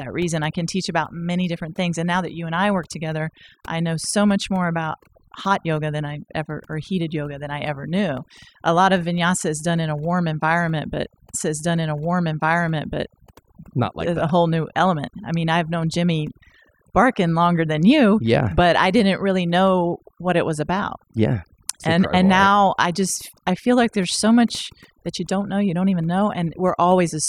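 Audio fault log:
throughout, overdone noise removal: lowered background breaking up into twinkling specks, because an over-strong reducer cuts bands sitting near its noise estimate.
11.33 to 13.33 s, stream segment repeated: a small blip, then about 2 s of speech plays again, because the same segment was fetched or queued twice.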